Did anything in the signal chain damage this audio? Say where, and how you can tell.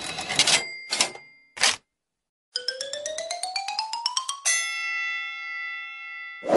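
Yes. MP3 compression damage runs through the whole clip: the texture sounds watery and swirly, with weak detail flickering in and out. That points, likely, to a codec stage at a low bitrate of about 48 kbps.

Pre-echo occurs at 2.52 to 2.55 s: a hiss about 36 dB above the quiet rises over 36 ms before a sharp attack, which sounds softened. This fits a long transform block of about 48 ms that never switched to short blocks.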